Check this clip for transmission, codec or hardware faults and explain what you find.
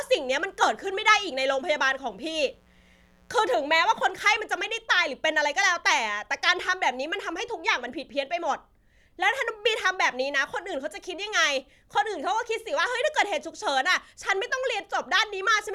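One hardware fault is present: mains buzz during the opening of the speech. From 0.0 to 4.03 s a steady, raspy buzz sits well below the speech. It comes from 60 Hz wiring, where switching spikes twice per cycle leak in through poor shielding or a dimmer, spreading harmonics up into the kilohertz range.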